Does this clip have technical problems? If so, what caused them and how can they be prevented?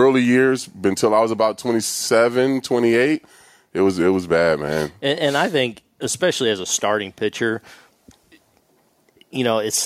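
No, nothing technical goes wrong in this speech recording, so there's no cause to track down and nothing that needs preventing.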